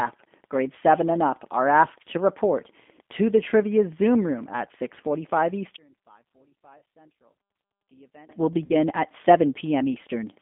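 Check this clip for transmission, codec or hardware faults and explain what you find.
Two faults are present: the G.729 codec throughout, and two short dropouts covered by VoIP packet loss concealed by the speech codec.

The whole clip is coded with the G.729 codec at 8 kbit/s. The decoder rebuilds speech from a vocal tract filter, a pitch predictor and a few pulses per frame. The band runs from 200 Hz to 3.5 kHz, and the voice sounds plainly rough and synthetic.

VoIP packet loss concealed by the speech codec occurs from 6.78 to 6.82 s and from 8.65 to 8.75 s. The decoder extends its last pitch and filter while the gain drops. The gaps fit about four and five lost 10 ms frames. Each sounds like a brief buzzy or noisy smear that fades, with weak speech just afterwards.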